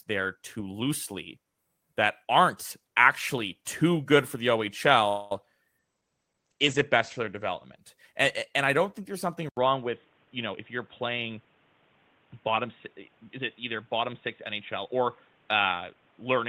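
This speech clip shows five kinds of call fault. At 5.08 to 5.32 s there is a likely call audio freeze: delayed packets probably emptied the jitter buffer, so the receiver stretched the last sound into a fading buzz for about 226 ms. The speech then resumes where it stopped, with nothing lost but 226 ms of extra delay. At 5.38 s a short concealed packet loss follows: about 10 ms of audio never reached the decoder, and the receiver patched only about 3 ms by continuing the previous sound, leaving a brief smear or wobble. From 5.79 to 7.82 s there is a call bitrate drop. The bandwidth estimate fell and the encoder went from 32 to 12 kbps, bottoming out for about 1.03 s. Coarser coding and an audio band narrowed from 20 kHz to 8 kHz make the speech sound rough and muffled. Right after "don't think there's something", at 9.49 s, the input is likely switched to a poorer device, such as another microphone or a headset's call profile. 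There is an 80 ms gap, and from then to the end nothing sounds above 3.8 kHz, with a new noise floor about 35 dB under the speech at roughly the same loudness, so the sound turns dull and boxy. Finally, three jitter buffer speed-ups occur as the receiver trims excess buffered audio by cutting pitch periods. From 10.46 to 11.34 s the speech plays at 110% speed, losing about a tenth of a second. From 12.11 to 13.39 s and again from 13.80 to 15.01 s it runs at 103%, shedding roughly 50 ms each time, so the speech runs a little faster without any change in pitch.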